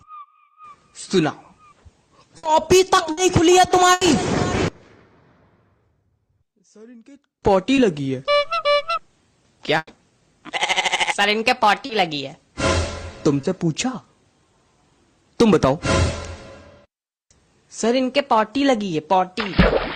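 Bursts of packet loss hit at 2.37, 3.11 and 3.93 s, with about 60, 60 and 80 ms gone. Each gap gets bridged by a fading continuation of the last sound before the audio picks up further along. From 4.68 to 7.43 s the sound drops by about 26 dB and turns faint, likely one channel inverted cancelling itself in a mono sum. At 7.75 s there's a short concealed packet loss, a 20 ms patch that comes across as a tiny smear. Another burst at 9.77 s loses about 100 ms, with the fill fading into a brief 20 ms silence before the audio resumes. Two more short concealed losses follow at 11.85 s (40 ms) and 13.41 s (20 ms), each a quick smear or wobble.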